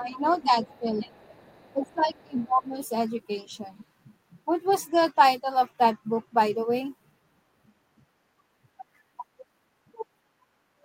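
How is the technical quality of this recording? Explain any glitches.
The first three seconds are troubled by echo-canceller trouble during double talk. After that, nothing more is flagged.

Speech suppressed in double talk occurs from 0.0 to 1.25 s and again from 1.73 to 2.75 s. The talker's level sinks by around 15 dB in the first stretch and nearer 20 dB in the second, for about a second each time. The likely cause is an echo canceller that, with both parties talking, could not tell the local talker from loudspeaker echo and attenuated everything. Unlike a network dropout, the talker's voice dips while both sides are talking.

The other side's voice leaking through appears at 0.04–0.44 s, 0.63–0.8 s, 1.22–1.93 s, 2.16–2.21 s and 2.38–2.45 s. It is a faint second voice roughly 25 to 35 dB below the talker. It is likely residual loudspeaker sound the canceller failed to subtract from the microphone. 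It differs from room reverberation because it is a separate voice rather than a tail on the talker's own sound.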